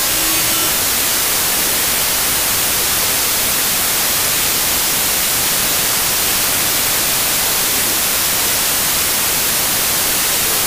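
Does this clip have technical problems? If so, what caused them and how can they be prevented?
Yes. Wrong sample width runs through the whole clip: 32-bit integer data were read as packed 24-bit, so samples straddle the original sample boundaries and the audio plays at 0.75 speed and lower pitch under loud noise. On a spectrogram this appears as broadband noise smearing everything, and the waveform shows dense, jagged clutter. Storing and checking the sample width in the file header prevents this.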